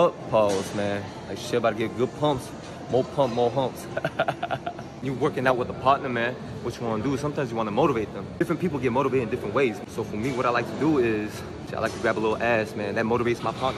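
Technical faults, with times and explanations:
No technical faults can be heard anywhere in this audio.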